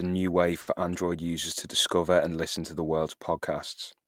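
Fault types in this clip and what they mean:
Short stall from a late packet: at 0.61 s the speech hangs on one sound for about 60 ms, with a slight buzz or dip, then carries on from the same point. A late packet emptied the jitter buffer, so the receiver stretched the last audio until it arrived, losing nothing.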